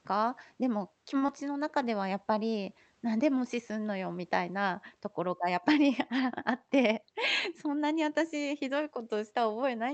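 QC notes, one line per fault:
1.17 to 1.24 s, short stall from a late packet: a packet arrived late, the jitter buffer emptied, and the last sound was held for 44 ms before playback resumed at the same point, adding 44 ms of delay. Nothing is lost, unlike a concealed loss, so it sounds stretched rather than smeared.
1.26 to 1.30 s, short concealed packet loss: about 20 ms of audio never reached the decoder, and 21 ms of substitute sound, continued from the preceding signal, was blended back into the real stream. Unlike the stall, material is actually gone, heard as a brief smear or wobble.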